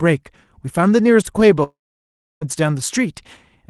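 Speech carried over a call link, with audio reaching up to about 12 kHz. From 1.63 s to 2.44 s there is a long network dropout, likely. The last sound smears into a fading buzz. About 0.67 s of silence follows. Speech then resumes with that stretch gone.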